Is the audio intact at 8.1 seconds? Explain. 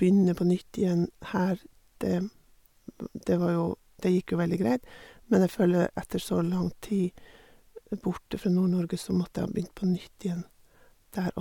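Yes, at 8.1 seconds the speech plays through intact, with no dropout, glitch or other audible fault at that moment.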